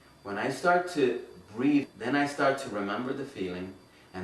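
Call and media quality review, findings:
Skip ahead, 1.83–1.85 s. Audio jumps forward with no gap, losing around 0.7 s of material; both sides joined nearly directly. Probable component: jitter buffer overflow discard or loss in transit. Unlike a dropout, no silence or fill; content simply missing.

Jitter buffer speed-up, 1.93–4.15 s. Playback runs at 107% speed, hurried, pitch unchanged. Short pitch-period pieces cut repeatedly, removing about 0.15 s total to drain excess buffered delay after the jump. Unlike resampling drift, pitch stays constant.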